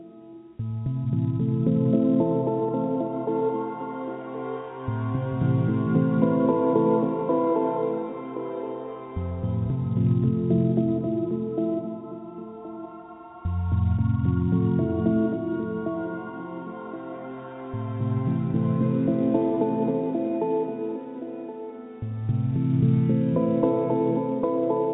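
No faults can be heard; the audio comes through a telephone-grade call path with nothing above 4 kHz, which fits a G.711 A-law codec at 64 kbps.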